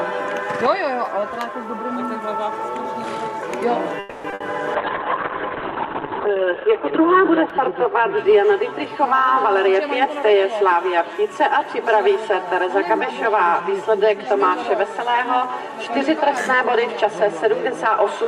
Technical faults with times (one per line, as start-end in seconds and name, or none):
3.99-4.26 call audio freeze
4.30-4.34 short concealed packet loss
4.34-4.42 burst of packet loss
4.76-9.93 call bitrate drop
8.98-10.53 jitter buffer speed-up
14.82-17.81 jitter buffer speed-up